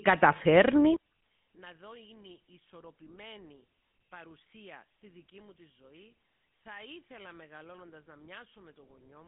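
GSM full-rate codec damage runs through the whole clip. The speech has passed through the early GSM scheme, which models the vocal tract and drives it with a sparse, regularly spaced pulse excitation, consistent with a roughly 13 kbps stream. The band sits on a phone line of about 150 Hz to 3.5 kHz, with nothing above 3.8 kHz. The resulting buzzy, gravelly roughness is plainly audible.

From 0.96 s to the end at 9.27 s, the level drops by about 28 dB and the speech nearly vanishes, leaving only a faint residue. The likely cause is one channel inverted: with one side of the stereo pair at reversed polarity, everything common to both channels, including the centred voice, cancels when they are summed to mono, and only the small difference between them survives.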